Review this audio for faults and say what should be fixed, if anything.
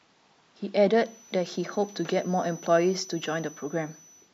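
A feedback whistle, a thin steady 6 kHz tone roughly 25 dB below the speech, runs from 0.87 s to the end, likely from a loudspeaker-to-microphone loop held at the edge of feedback. On a spectrogram it shows as a flat horizontal line. To prevent it, lower monitor gain, move the microphone away from the loudspeaker, or notch 6 kHz.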